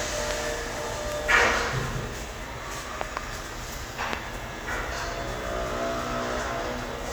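Loud pops break in four times. At 0.31 s and 1.12 s there are single sharp pops, the first roughly 20 dB above the surrounding sound and the second somewhat weaker. From 3.01 to 3.19 s two pops arrive in quick succession, and at 4.13 s the strongest pop lands, roughly 25 dB up. The likely cause is a sudden voltage step or pulse, from a plug, switch, static discharge or driver glitch, riding on top of the sound, which continues underneath.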